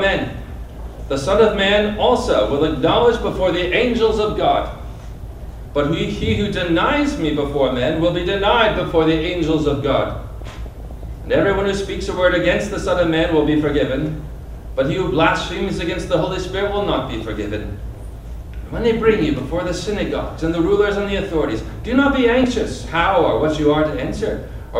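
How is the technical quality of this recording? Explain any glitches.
The recording is marred by four bursts of DAB burbling, at 3.28 to 3.65 s, 10.41 to 11.03 s, 16.99 to 17.36 s and 22.32 to 22.85 s. Weak reception let bit errors, a fraction of a percent, slip past error correction into the MP2 data. Corrupted samples put short blips of noise into individual sub-bands over the sound.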